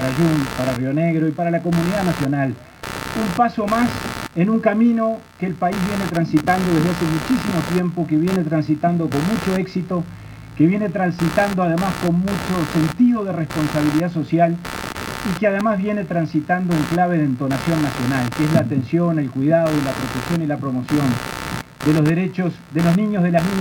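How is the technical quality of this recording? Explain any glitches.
The technical quality is poor because of one fault present for the whole clip. Computer activity noise runs from start to finish. It is a buzzing chatter pulsing around 70 times a second, only about 10 dB below the wanted sound. The computer's changing load disturbs the shared ground, so the noise follows the machine's activity, not the audio.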